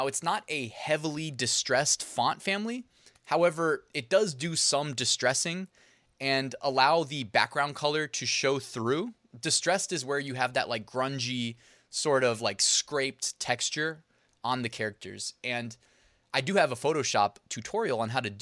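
No technical faults detected.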